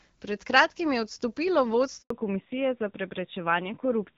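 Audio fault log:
2.00–2.10 s, handover gap: right after "kratkim je odstopilo" the speech drops out and goes silent for 100 ms. That's the call being passed from one network to another, with no speech frames getting through while the switch happens. The sound fades within a few tens of milliseconds rather than cutting with a click, and whatever was said during that tenth of a second is simply gone.
2.10–4.17 s, fallback to narrowband: once the gap ends the speech comes back duller and rougher, with nothing above 4 kHz for the rest of the clip. The new link settled on narrowband AMR at a rate that fits around 7.4 kbit/s, down from HD Voice at 12.65 kbit/s, which before the gap came through clear with only light codec roughness. So the sibilance and air that were there in the first two seconds disappear.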